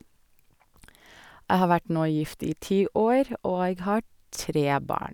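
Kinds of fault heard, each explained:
No technical fault can be heard anywhere in the speech. There is nothing here that needs a line of its own.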